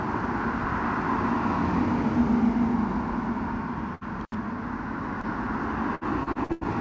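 At 3.95 to 4.04 s, a burst of packet loss: the receiver extends the last sound for about 60 ms, fading it, then skips 60 ms. A spectrogram shows a smeared, decaying band before a hard jump.

From 4.21 to 4.35 s, an intermittent contact opens the line for about 71 ms. The waveform collapses to a near-flat trace bracketed by sharp crackle spikes.

At 5.21 to 5.26 s, a short concealed packet loss patches 22 ms and drops 30 ms, heard as a brief smear. It shows as a slight vertical discontinuity.

From 5.95 to 6.67 s, repeated packet loss makes the sound choppy and robotic. Seven gaps, the longest 89 ms, are patched with continued sound that covers about 38% of the stretch, while 270 ms goes missing. The spectrogram breaks into repeating blurred blocks. Across all of this, nothing sits above 8 kHz, which fits a G.722 call path at 64 kbps.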